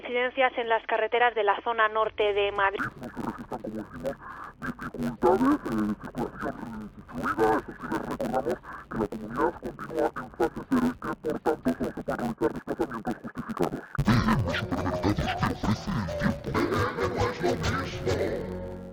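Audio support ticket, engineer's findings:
Interleaved audio read as planar, 2.79 s to end. Dull, robotic tone with a buzz near 94 Hz, no clear octave drop. Likely the deinterleave stage. Each 10.67 ms block, which fits a 512-sample block, has alternating L/R samples split into halves, and both play at half speed.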